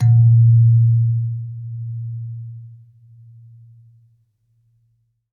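No technical faults are audible.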